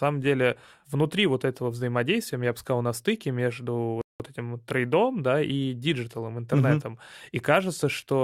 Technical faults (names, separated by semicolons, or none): rebuffering stall